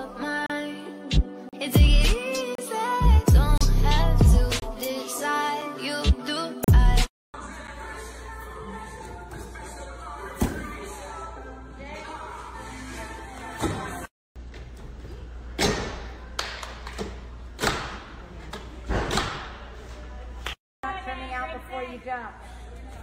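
Short, hard-edged dropouts of silence cut into the sound at 0.46, 1.49, 2.55, 3.58, 4.60, 5.61, 6.64 and 7.67 s, recurring about once per second. Most last 22 to 38 ms; those at 5.61 and 7.67 s are brief ticks of 5 to 9 ms. This is a gap between stream segments. The 1-second segments' timestamps don't quite join, and the player fills each gap with silence rather than losing audio.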